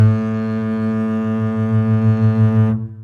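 No technical faults detected anywhere in this music clip.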